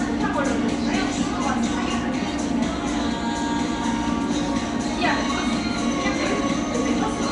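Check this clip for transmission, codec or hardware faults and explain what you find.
One codec fault is present. Nellymoser compression, throughout: the damage is plainly audible, likely from the Nellymoser Asao codec at a rate that fits about 44 kbps. Its fixed bit budget starves weak bands, which are filled with noise, leaving a rough, hissy, smeared texture with nothing above 10.6 kHz.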